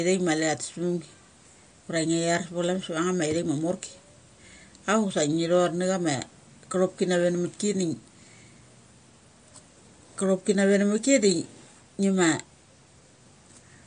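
It's speech, with plainly audible MP3 compression throughout, likely from a bitrate around 48 kbps. Nothing survives above 9.5 kHz, and weak detail drops in and out, sounding watery.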